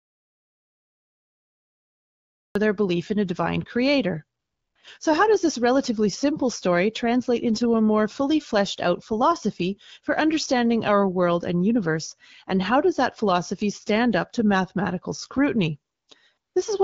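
From the very start until 2.55 s there is an audio dropout to silence. The input was likely lost, and the recording kept writing silence, so the gap is dead silence with no room tone at all. Whatever came before is gone, and the sound enters abruptly mid-flow with "their belief in a".

Later the sending phone decided the talker had stopped and halted its speech frames, so the receiver filled the pauses with AMR comfort noise built from a rough sketch of the background's level and spectrum. This happens from 4.39 to 4.75 s, right after "in a divine creator", then from 15.93 to 16.07 s after "up to mathematical scrutiny", and again from 16.37 to 16.55 s. The gaps last 360, 140 and 180 ms. In each, the real background is swapped for a smooth, even hiss that switches on and off against the surrounding sound. The speech itself carries the light, band-limited character of the AMR wideband (HD Voice) codec, which fits a rate of about 12.65 kbit/s.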